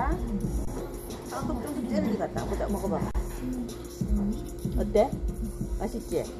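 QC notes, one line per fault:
0.65–0.67 s, 3.11–3.15 s and 5.37 s, underrun with held sample: the output buffer ran dry for about 23 ms, 35 ms and 2 ms (the first fits a 1024-sample buffer). The converter froze on its last value, so the sound goes flat with little or no click. Nothing was lost, so playback picks up where it stopped with only a soft join.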